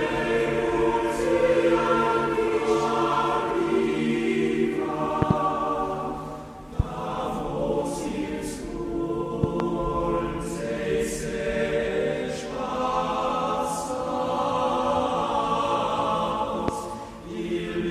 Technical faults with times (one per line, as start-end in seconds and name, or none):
5.22-5.33 loud pop
6.80-6.82 loud pop
9.44-9.63 loud pop
16.68-16.71 loud pop